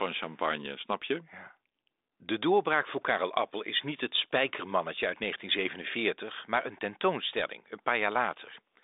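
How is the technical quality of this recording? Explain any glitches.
No audible glitches or faults.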